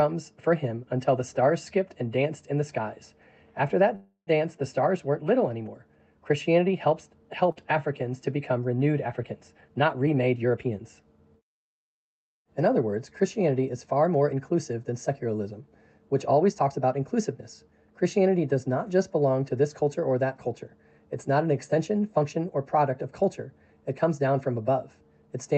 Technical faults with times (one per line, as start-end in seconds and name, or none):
3.95-4.38 call audio freeze
7.52-7.58 short concealed packet loss
9.12-10.86 jitter buffer speed-up
16.33-17.06 jitter buffer speed-up